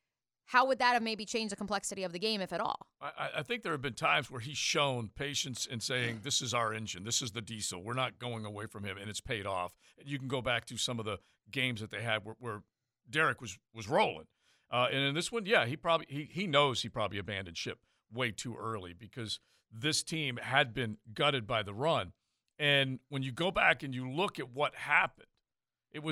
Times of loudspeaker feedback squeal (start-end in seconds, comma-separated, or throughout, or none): none